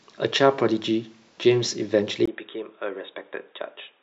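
At 2.26 s there's a gap of about 20 ms, and from there to the end the speech suddenly goes dull and boxy, nothing above about 3.8 kHz, and roughly 10 dB quieter, with new, faint background noise sitting well below the voice. That's likely the input switched to a poorer device mid-recording, maybe another mic or a headset's call profile, whose narrow band, different level and own background noise take over from the original input.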